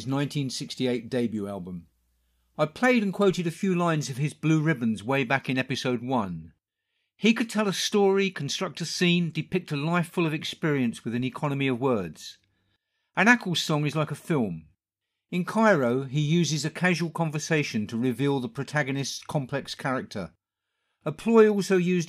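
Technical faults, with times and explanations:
No technical faults can be heard in this speech.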